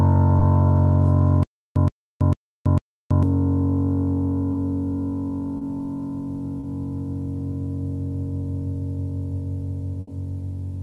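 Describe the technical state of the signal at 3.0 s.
At 3.0 s the music sits inside a stutter with silent gaps running from 1.43 to 3.23 s, most likely a stalled player or stream that replays its last fragment on each retry and then runs dry. A burst of about 121 ms repeats four times, each followed by about 328 ms of dead digital silence, so it returns at a steady pace of one every 449 ms. The music that belonged in that span never plays.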